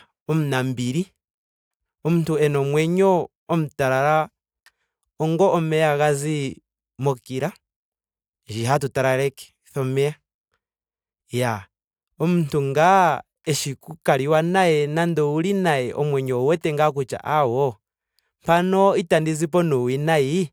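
No technical faults are audible anywhere in the speech.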